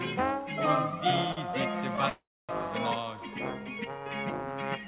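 At 1.32 s and 1.51 s there are short stalls from a late packet. Each time the jitter buffer ran dry. The last sound is stretched for 48 ms, then 22 ms, before resuming. Nothing is lost.

From 2.09 to 2.51 s there is a call audio freeze. The sound turns to a fading buzz, then about 260 ms of silence. Packets were likely held up in transit. The audio then resumes where it stopped, with a gap of about 0.4 s inserted.

Throughout, the call path carries nothing above 4 kHz.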